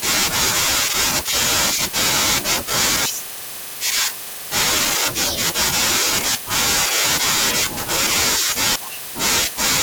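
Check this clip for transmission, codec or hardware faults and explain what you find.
There's one fault in the speech, a skip at 4.96 s. The audio jumps straight ahead with no gap, and about a tenth of a second of sound simply isn't there, so the speech lurches forward for an instant. That's most likely audio missing between chunks. The recorder or processor appears to handle the sound in 2-second blocks, and it dropped a short slice while closing one block and opening the next. The two sides were then butted together.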